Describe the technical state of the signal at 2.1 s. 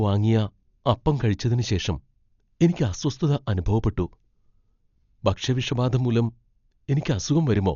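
At 2.1 s the speech carries the same damage present across the whole clip: it is band-limited, with nothing above 6.9 kHz, and sounds dull and grainy, with a rough, fluttering noise clinging to tonal parts. This is likely Dolby Digital compression at a low rate, which fits about 48 kbps. The encoder narrows the band and starves many spectral lines of mantissa bits, leaving the decoder to fill them with dither noise.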